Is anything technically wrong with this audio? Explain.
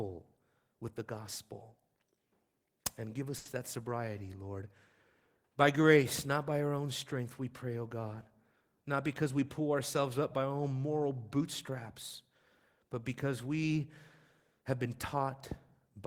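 Yes, there are two faults. From 3.37 to 3.47 s there is a short stall from a late packet: a packet missed its slot, the jitter buffer ran dry, and the receiver stretched the last sound for 80 ms until it arrived. Nothing is lost, but that sound hangs unnaturally long, with a faint buzz or dip, and everything afterwards runs 80 ms later.

From 8.93 to 9.60 s there is a jitter buffer speed-up: with too much audio queued, the receiver trimmed short pitch-period slices repeatedly, removing roughly 40 ms in all. The speech plays at 105% speed with unchanged pitch, so that stretch sounds slightly rushed.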